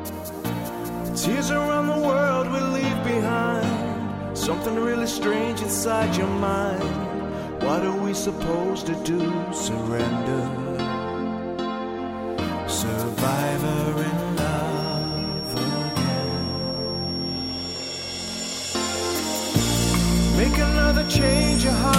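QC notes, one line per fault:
14.69–21.99 s, feedback whistle: thin 5.5 kHz tone about 10 dB below the sound, swelling and fading slowly in level but never building into a howl, likely a speaker-microphone loop held just short of runaway.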